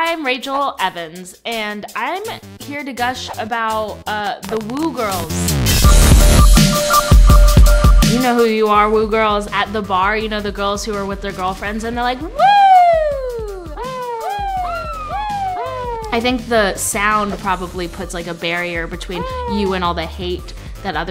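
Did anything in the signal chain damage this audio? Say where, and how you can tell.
Yes. A train of clicks runs from 4.27 to 5.21 s, likely electrical interference coupling into the analogue wiring. About ten sharp, similar pops arrive unevenly at around 11.8 per second, peaking about 10 dB above the surrounding sound, heard as uneven ticking laid over it.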